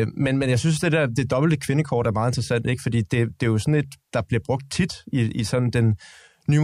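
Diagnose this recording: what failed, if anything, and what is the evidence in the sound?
Nothing failed: the speech shows no dropout, distortion, noise, level jump or timing fault at any stage from capture to playback.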